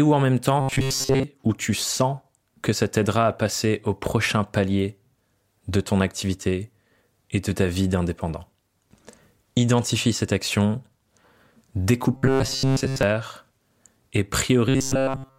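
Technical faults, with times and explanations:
0.61–1.24 s (between "où en même temps" and "ou tu sens que"), 12.13–13.03 s, 14.69–15.39 s: robotic sound from repeated short buffers, a rigid 134 Hz buzz, likely from audio arriving too seldom so a roughly 7.5 ms stretch repeats in place of skipped audio, most of each span in the first two and all of the last.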